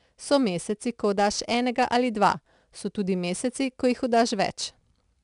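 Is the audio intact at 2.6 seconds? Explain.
No. At 2.6 seconds the speech carries 4-bit ADPCM compression, present through the whole clip. Each sample is coded as a coarse 4-bit step from a predicted value, so the error becomes a gritty hiss that rises and falls with the speech level, roughening attacks where the step size lags. Nothing sounds above 10.6 kHz, which fits a bitrate near 89 kbps. Unlike a perceptual codec's watery, swirling artefacts, this noise is broadband and tracks loudness.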